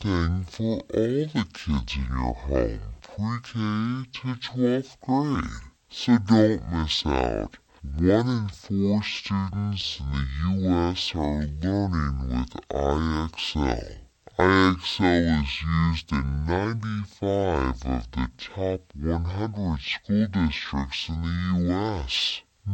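From start to finish the speech shows stereo read as mono: interleaved left and right samples run as one channel, so everything plays at half speed and an octave low. A spectrogram shows harmonics compressed downward, with a fainter mirrored copy filling the upper half.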